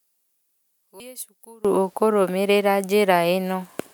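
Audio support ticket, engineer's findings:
One channel likely inverted in polarity, 0.00 to 1.65 s. Mono sum cancels the shared centre content: speech drops about 24 dB, leaving a faint difference signal until normal level returns at 1.65 s.

Compressed frames skipped at 1.00 s. Decoder drops a short run of frames, consistent with about two frames of roughly 93 ms each. Speech jumps ahead by around 200 ms.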